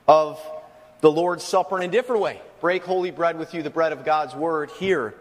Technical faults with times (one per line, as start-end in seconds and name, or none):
1.78-1.83 corrupt frame decoded